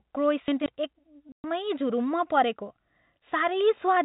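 From 0.48 to 0.66 s, chunks out of order: one 60 ms chunk of speech plays two chunks late, after the two that should follow it. Unlike a dropout, nothing goes missing. The speech briefly sounds jumbled, with three hard joins.

From 1.32 to 1.44 s, packet loss filled with silence: a clean 120 ms hole cuts the speech, which fits six lost 20 ms packets. The silence has hard edges and no repeated or smoothed-over sound, so the lost packets were not concealed. Beneath both faults, the telephone-band G.711 coding sits faint.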